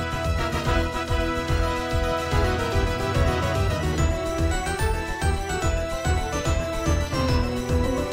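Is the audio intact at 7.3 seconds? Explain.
Yes, at 7.3 seconds the audio plays through cleanly, with no dropout, click, distortion or other fault.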